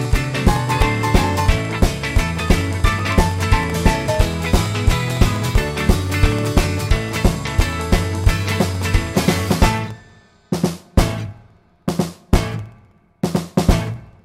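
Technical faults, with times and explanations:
0.05–14.19 s, periodic USB or driver dropouts: every 64 ms, about 200 times, roughly half a millisecond of audio drops to silence as the bus or driver stalls, giving a steady ticking. The waveform shows tiny evenly spaced gaps; the spectrogram shows regular thin vertical broadband lines.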